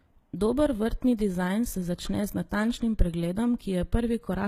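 Throughout the speech, sibilants sound gritty and metallic, the likely mark of HE-AAC compression at a bitrate near 20 kbps, rebuilding treble by band replication.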